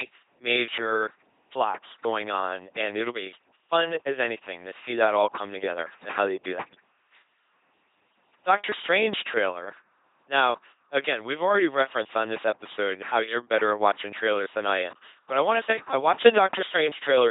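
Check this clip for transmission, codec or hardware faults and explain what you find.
Two faults are present: LPC-10 vocoder coding across the whole recording, and a sudden gain jump near the end.

Throughout, the speech passes through an LPC-10 vocoder at 2.4 kbit/s, rebuilt from a short-order filter driven by buzz or noise, so it sounds heavily robotic, with nothing above 3.8 kHz.

From 16.26 to 16.37 s, just after "to say I watch", level steps up by about 12 dB, likely from gain applied without a ramp, lifting speech and background together.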